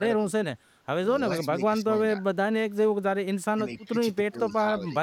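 The speech dips in level at 0.00 to 0.26 s, 1.25 to 1.33 s, 1.53 to 2.52 s, 3.54 to 3.94 s and 4.29 to 4.96 s. The deepest dip is about 20 dB, in the 1.53 s stretch, and the dip at 1.25 s is only about 5 dB. This is speech suppressed in double talk, likely from an echo canceller ducking the talker while the far side spoke. The voice is pushed down in patches. Within the 3.54 s dip, at 3.78 to 3.84 s, there is an echo leak, likely a far-end loudspeaker echo that its canceller missed. It is a faint scrap, about 35 dB below the speech, delayed by 292 ms. It is a late copy rather than room reverberation.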